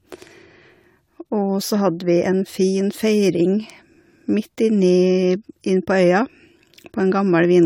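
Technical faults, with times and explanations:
Throughout, generation loss: swirly, hollow, smeared speech with blurred attacks, nothing above 19.9 kHz; likely about four re-encodings, fitting AAC-LC at 96 kbit/s.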